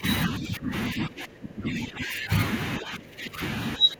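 Speech that keeps dipping in level, by about 15 to 20 dB, at 0 to 0.05, 0.27 to 0.73, 0.89 to 2.32, 2.79 to 3.41 and 3.77 to 4.0 s. This is likely speech suppressed in double talk. An echo canceller turned the talker down while the far end spoke.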